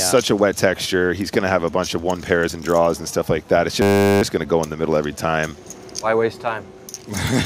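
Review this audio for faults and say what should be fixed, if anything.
A system hang loop runs from 3.82 to 4.22 s. The driver stalled while the hardware replayed one 10 ms buffer 40 times, producing a steady 100 Hz buzz. A spectrogram shows horizontal lines at multiples of 100 Hz, and the waveform shows one identical segment tiled repeatedly. A watchdog that mutes output whenever the buffer stops being refilled would prevent it.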